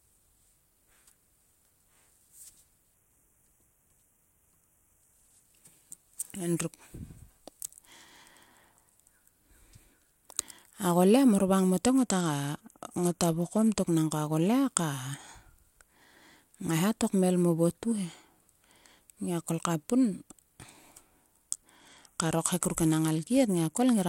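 Three Bluetooth SBC bit pool drops, at 2.9–5.4 s, 11.8–13.8 s and 21.8–23.9 s, dull the treble and add gritty noise, consistent with the bit pool falling from 28 to 12 (about 96 kbps) on a congested link. A spectrogram shows the upper bands thinning out and grainy noise across the bands that remain.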